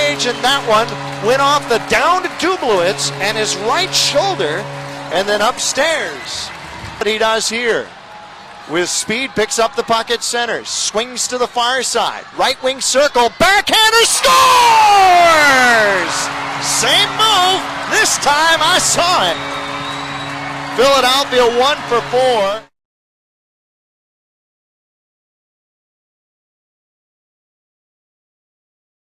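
At 4.93 s the audio suddenly turns coarse and rough. This is a call bitrate drop. The call's bandwidth estimate fell, and the encoder was forced to spend far fewer bits on the signal. The sound fits a fall from 96 kbps to about 17 kbps. The thinned, smeared quality holds for about 1.3 s. By 6.29 s the bitrate has recovered, and the sound clears again.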